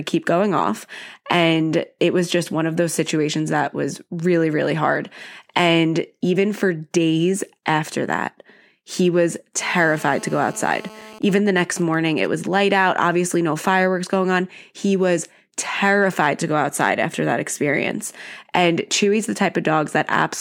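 From 9.61 to 11.19 s a GSM phone buzz sits under the speech. A 2G handset in a call nearby is transmitting in bursts at about 217 per second. The audio circuit rectifies those radio pulses. The result is a hard, raspy buzz at 217 Hz, rich in harmonics. It has nothing to do with the speech. It holds steady at about 20 dB below the signal.

From 11.22 to 12.27 s the pattern changes to GSM signalling bursts. The phone is still in the call, but its user has gone silent. It now sends only short groups of radio bursts instead of continuous transmission. These get rectified too. They come through as even ticks with a longer 217 Hz buzz twice a second. The level is roughly the same, about 20 dB under the speech.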